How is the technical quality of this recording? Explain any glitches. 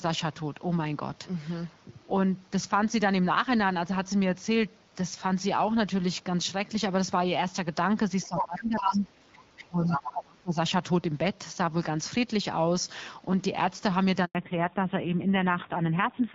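It's a speech call with a few real glitches, all bunched in the back half: a rough patch of echo trouble around 8 to 10.6 s, then a short dropout and a drop in bandwidth near the end. Before that the audio has the light, clean character of HD Voice coding.

Other side's voice leaking through: a second voice slips in at 8.23–8.42 s (about as loud as the talker), 8.91–8.99 s (about 15 dB down), 9.57–9.66 s (about 20 dB down) and 9.85–10.12 s (about 5 dB down). Most likely the talker's loudspeaker feeds the mic and the echo canceller isn't catching all of it, so you hear the far end coming through.

Speech suppressed in double talk: from 8.27 to 10.57 s the talker is turned down while that other voice is present, around 20 dB down at worst, and roughly two seconds of it is affected altogether. The likely cause is the echo canceller giving up on separating talker from echo during overlap and ducking everything.

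Handover gap: at 14.25–14.35 s the voice dies off quickly and there's 100 ms of silence. That's the call switching networks with no speech frames arriving during the changeover, so whatever was said in that window is simply gone.

Fallback to narrowband: right after the gap, from 14.35 s to the end, nothing above 4 kHz survives and the voice goes duller and a bit raspy. The call dropped from wideband to an old narrowband codec, and the roughness fits a low rate around 5.9 kbit/s.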